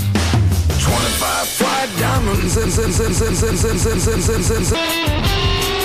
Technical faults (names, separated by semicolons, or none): broken-record loop